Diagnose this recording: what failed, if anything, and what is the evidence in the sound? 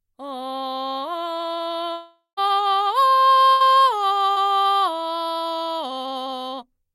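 The music is cut by three network-stage losses, each patched by the receiver's concealment.

From 1.93 to 2.39 s the music stops and is replaced by a continuation of the last sound that fades out, with about 140 ms of near-silence before playback returns, about 440 ms further on. This is likely a long network dropout: nothing arrived for nearly half a second, so the decoder extrapolated until it ran out and then muted.

At 3.51 to 3.62 s a shorter hole appears. The last sound is held and turned down over about 90 ms, and the music resumes roughly 100 ms later than it would have. That is a burst of packet loss, several consecutive packets missing or arriving too late, with the gap bridged by a decaying copy of what came before.

Around 4.32 to 4.38 s there is only a brief smear. About 40 ms of music is missing and is filled by a continuation of the preceding sound, then blended back in. 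This is short concealed packet loss.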